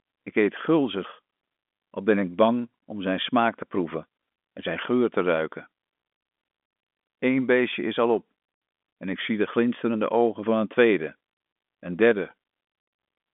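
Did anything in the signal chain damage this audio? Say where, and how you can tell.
No, the only coloration in this speech is the narrow telephone band, roughly 200 Hz to 3.5 kHz, which fits G.711 mu-law line coding working as designed, with at most a faint level-following hiss from its logarithmic quantisation.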